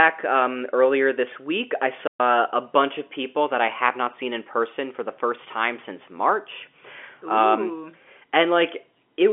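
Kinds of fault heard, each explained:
Playback stall: the player likely ran out of data or was blocked, so the sound cuts to silence for 125 ms after "earlier this week I", then resumes.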